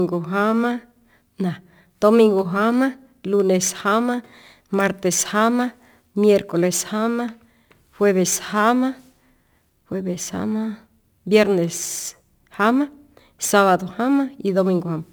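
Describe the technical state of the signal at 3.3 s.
At 3.3 s, as across the whole clip, crude rate conversion is present. Samples were simply repeated to change rate, with a pattern that points to 44.1 kHz stretched to 48 kHz. This leaves a gritty, inharmonic fizz roughly 25 dB below the speech. Unlike steady hiss, it rises and falls with loud, bright sounds.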